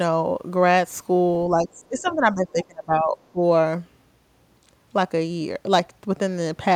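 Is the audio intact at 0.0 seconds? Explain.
Yes, the speech is intact at 0.0 seconds, with no fault at that moment.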